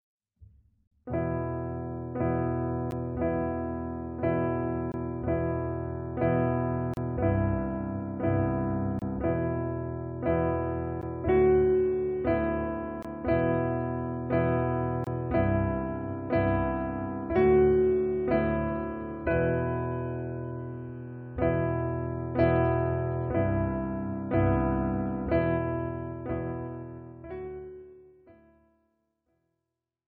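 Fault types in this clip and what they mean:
Gap between stream segments: at 0.87, 2.91, 4.92, 6.94, 8.99, 11.02, 13.03 and 15.04 s, roughly every 2 s, the sound cuts abruptly to silence for between 11 and 42 ms, longest at 0.87 s. Consecutive 2-second segments are timed so they don't quite meet, and the player pads each hole with silence. The result is hard-edged dropouts that stretch the timeline without removing any of the audio.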